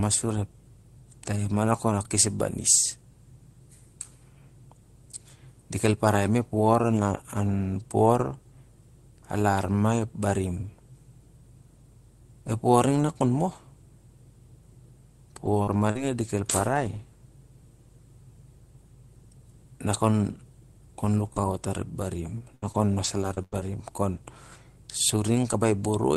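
Lost packets rebuilt from error correction occur at 15.45, 15.67, 15.73, 15.95, 16.27, 16.49 and 16.73 s, each covering 20 ms. In each case the next packet carried a low-bitrate backup copy of the lost one, and the decoder played that copy, so there is no gap. Those frames come out rougher and grainier than the audio around them. This call path is Opus, and its top end stops near 12 kHz.

Short concealed packet loss falls between those events, at 15.63–15.69 s and 15.91–15.97 s. Each loss lasts about 40 ms and never reached the decoder in time. The receiver extended the preceding sound for just under 40 ms each time, then crossfaded back into real audio. This leaves a quick smear or wobble, and any brief consonant in those windows can vanish.

Repeated packet loss with a robotic sound runs from 21.25 to 23.62 s. Six separate gaps open across this stretch, the longest about 94 ms, and together they conceal about 11% of it. 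Each hole is patched by continuing the last sound, and a fresh hole follows soon after. The patched sections add up to roughly 0.27 s. The result is choppy sound with fragments missing.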